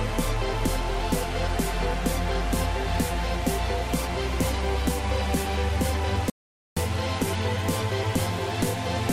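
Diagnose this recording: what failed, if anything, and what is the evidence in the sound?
Audio dropout to silence, 6.30 to 6.77 s: silent gap, flat waveform, blank spectrogram, no room tone; likely a lost input-device link.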